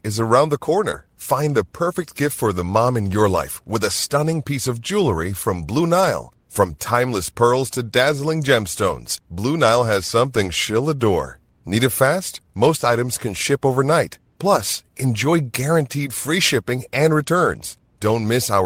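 Right after "is around the", at 0.91 s, there's a short concealed packet loss. About 20 ms of audio didn't arrive in time, and the decoder stretched the preceding sound for roughly 14 ms to cover the gap. That comes across as a quick smear or wobble before the real signal resumes.

Overlapping it, from 0.93 to 0.95 s, is a lost packet rebuilt from error correction. The 20 ms stretch sounds like a single packet recovered from the low-bitrate copy carried in the next one. So there's no dropout, but that sliver sounds rougher and grainier than what surrounds it.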